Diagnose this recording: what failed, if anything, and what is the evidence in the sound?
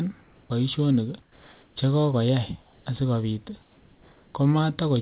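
In the pauses at 0.22–0.50 s, 1.22–1.76 s (before "che kokoyay asikopit"), 2.62–2.86 s (after "che kokoyay") and 3.62–4.34 s, the background becomes steady, featureless hiss about 2–3 dB quieter. This is comfort noise in place of the background, likely from discontinuous transmission in call processing. A noise gate would leave silence instead.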